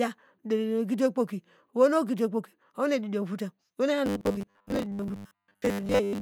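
From 4.06 s to 6.21 s the speech turns into a rigid, metallic buzz at a fixed 100 Hz that only loosely tracks the words. This is robotic sound from repeated short buffers, likely caused by audio arriving too seldom, so roughly 10 ms chunks are looped for most of that stretch while real audio is skipped.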